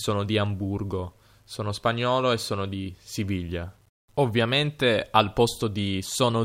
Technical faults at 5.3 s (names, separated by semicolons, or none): low bit depth without dither